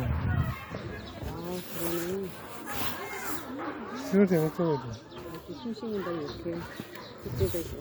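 No audible technical faults here.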